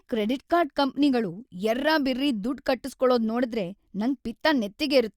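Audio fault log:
Nothing to log here, as this bit of speech comes across without any faults worth noting.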